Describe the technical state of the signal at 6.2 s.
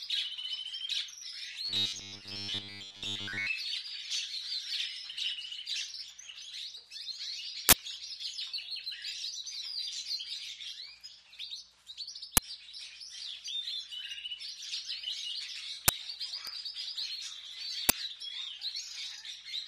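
At 6.2 s the signal is intact, with no technical fault present at that moment.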